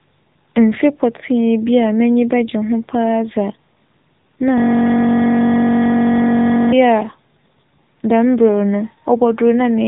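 From start to finish the speech carries AMR narrowband mobile codec damage. Nothing passes above 3.8 kHz, so the sound is muffled and phone-like. The low bitrate, which fits 7.95 kbps, leaves the voice plainly buzzy and synthetic.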